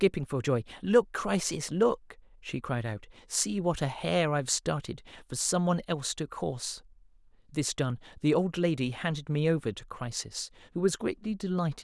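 No technical faults can be heard anywhere in the speech recording, with the signal holding steady and intact throughout.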